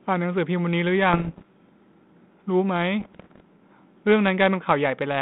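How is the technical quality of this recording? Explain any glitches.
There are two stretches of bit errors on an ADPCM link. The sound comes through a narrow telephone band of about 150 Hz to 3.7 kHz, with a light, steady coding texture that fits 32 kbit/s G.726.

From 1.13 to 1.46 s and again from 3.00 to 3.41 s, roughly one bit in a hundred is flipped. Each wrong bit throws off the decoder's step size and prediction. The resulting pops ring on as rough bursts with brief jumps in level. Packet loss would instead leave clean gaps or smoothed-over silence.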